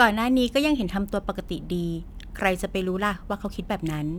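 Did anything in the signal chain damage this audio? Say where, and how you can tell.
Yes. From 2.18 s to the end, the speech picks up a gritty, inharmonic fizz riding on the louder and brighter syllables. This is crude rate conversion in the sample-rate stage. Samples were repeated to stretch the rate by a ratio that fits a 44.1 to 48 kHz change, with no filtering. The error sits roughly 30 dB below the speech. Unlike codec artefacts, it is a steady, patterned buzz that tracks the signal's level, not swirling or smearing.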